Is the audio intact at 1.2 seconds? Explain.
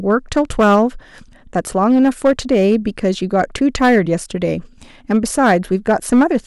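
No, hard clipping is present at 1.2 seconds and throughout the clip. The speech is driven about 7 dB past the level the signal path can carry, so every peak above that ceiling is sliced off flat. Only a small fraction of samples, around 3 percent, hit the limit, but each flattened top adds high harmonics, heard as a gritty crackle riding on the louder syllables.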